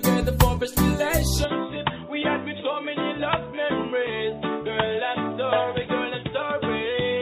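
At 1.44 s the sound abruptly turns duller and boxier and stays that way to the end, with no gap at the change. The level drops by about 5 dB, and a new background hiss sits roughly 35 dB below the signal. This is likely an input switched to a poorer device. On a spectrogram, energy above 3.8 kHz vanishes at a sharp vertical edge. The waveform shows a slightly smaller envelope from that point on.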